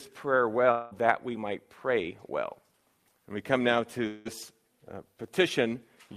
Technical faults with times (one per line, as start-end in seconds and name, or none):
0.71-0.93 long network dropout
4.07-4.27 long network dropout